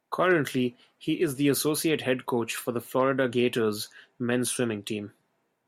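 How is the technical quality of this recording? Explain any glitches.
No glitches can be heard; the speech signal holds steady, without any break or disturbance in its reproduction.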